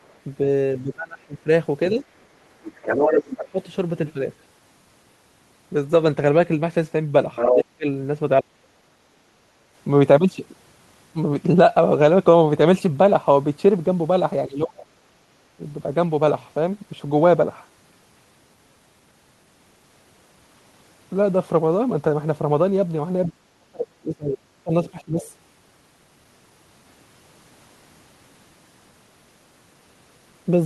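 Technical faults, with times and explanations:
0.02–3.41 s, 7.35–7.59 s and 23.26–25.3 s: other side's voice leaking through. A second voice rides under the talker, about as loud as the talker in the first two spans and roughly 15 dB lower in the last. It likely comes from loudspeaker playback the echo canceller failed to subtract.
0.83–3.6 s, 7.51–8.69 s, 14.47–15.61 s and 23.29–25.2 s: speech suppressed in double talk. The talker's voice dips by roughly 25 to 35 dB in pieces, for about half a second to a second and a half per span. This is likely the canceller clamping down while both sides speak at once.
9.07–9.33 s: background gated by the echo canceller. The room sound drops by about 6 dB for roughly 200 ms, then returns. The canceller pulled the microphone down while the loudspeaker was active, so the ambience briefly sinks out from under the sound.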